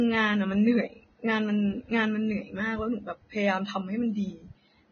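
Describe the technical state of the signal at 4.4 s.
At 4.4 s, as throughout, the speech sounds grainy and hissy with nothing above 6.5 kHz. The likely cause is heavy Vorbis compression, which coarsely quantises the treble into noise.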